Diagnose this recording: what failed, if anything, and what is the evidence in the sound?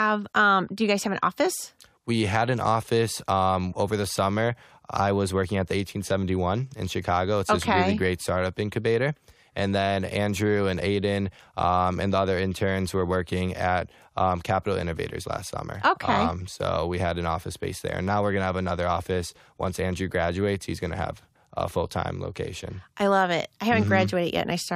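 Nothing failed: no stage from capture through playback leaves an audible defect anywhere in this speech recording, so there is no fault to diagnose.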